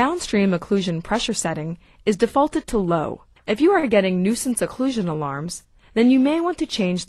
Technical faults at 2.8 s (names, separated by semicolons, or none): none